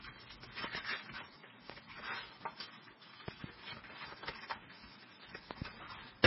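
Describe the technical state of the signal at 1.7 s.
At 1.70 s a single loud pop sits on top of the audio, lasting from 1.70 to 1.72 s and peaking at around 20 dB above the surrounding signal. Such a pop is likely caused by a sudden voltage step or pulse entering the chain, for example from a plug, switch, static discharge or driver glitch. The following circuitry shapes that pulse into a brief, sharp transient, while the underlying sound carries on beneath it.

This moment also shares the heavy MP3 compression present across the whole clip. Nothing is present above 5.6 kHz, so the top end is cut off flat, and the damage points to a very low bitrate of about 16 kbps. At that rate the encoder likely had too few bits and dropped weak spectral lines that flicker on and off between frames. The result is a watery, swirling texture with smeared attacks and dulled treble.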